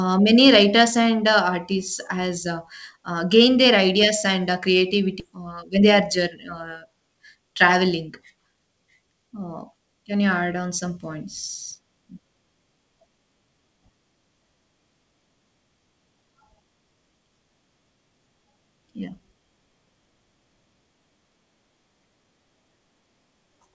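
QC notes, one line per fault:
5.20–5.22 s, skip ahead: Playback jumps forward with nothing filled in. About 0.7 s of speech is gone. Audio already waiting was discarded to cut the delay, so both sides of the cut join almost directly.
5.29–7.87 s, jitter buffer speed-up: Speech runs 10% fast at the same pitch and sounds hurried. The buffer held more than its target, so short pitch-period pieces were removed again and again, around 0.3 s in total.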